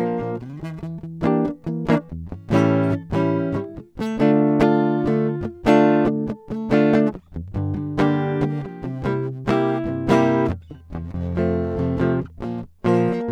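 A music clip with nothing technically wrong with it.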